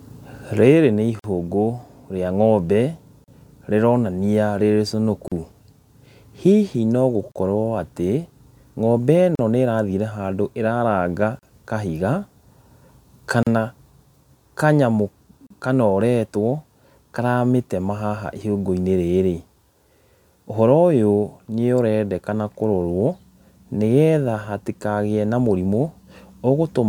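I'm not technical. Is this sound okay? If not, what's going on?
No. The speech has tiny silent holes at 1.19, 3.24, 5.28, 7.32, 9.35, 11.39, 13.43 and 15.47 s, each about 38 ms long (the first about 48 ms). This is a gap at a join of encoded pieces: separately compressed chunks were glued together with their built-in padding left in. The steady 2-second spacing sets it apart from random network dropouts.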